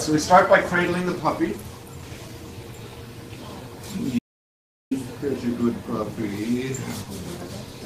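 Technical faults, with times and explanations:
Throughout: clock drift between sender and receiver. Timing wobbles unevenly across the clip because the sender's clock runs roughly 2% slow against the receiver's.
0.10–7.49 s: repeated timing corrections. Slight hiccups and unsteady pacing recur as the receiver repeats short pieces, playing at 98% speed and adding around 150 ms.
4.19–4.91 s: audio dropout to silence. The sound cuts to total silence with no room tone for 0.72 s, likely because the input was lost and silence was written.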